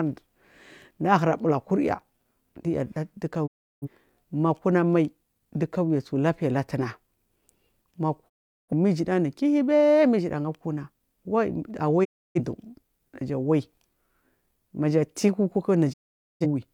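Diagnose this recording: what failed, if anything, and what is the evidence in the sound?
Speech fades out within 20 ms to silence at 3.46, 8.28, 12.03 and 15.92 s, 0.3 to 0.47 s each: a digital broadcast dropout, with the receiver muting failed frames.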